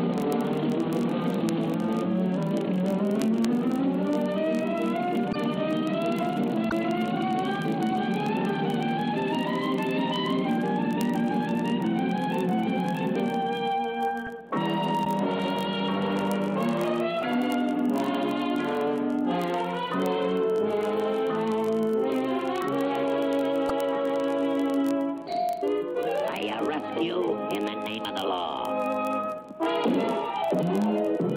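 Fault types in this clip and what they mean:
word clock ticks: A receiver running on its own clock, about 0.1% off the sender's, drops or repeats one sample each time they slip. Ticks come roughly every 0.02 s from 0.12 s to the end, sharp ticks of uneven strength at a steady rate.
broken MP3 bit reservoir: Brief disturbances at 5.32, 6.69, 15.04 and 23.68 s, each 24 to 40 ms, where the audio skips forward, likely from cut MP3 frames reading the wrong bytes. The 24 ms frame length fits MP3 frames, unlike a plain dropout.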